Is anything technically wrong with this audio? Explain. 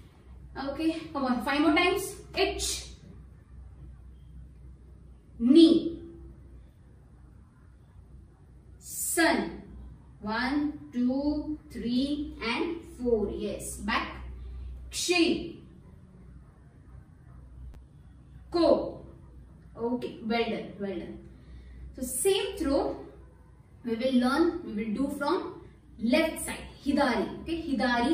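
Yes. Chunks out of order at 17.73 to 17.75 s: a 10 ms chunk of the audio arrived or was written one chunk late, so it plays after the chunk that should have followed it. No audio is lost, but two short pieces swap places, leaving three hard joins where the waveform jumps instead of continuing smoothly. The result is a brief jumbled flicker in the sound.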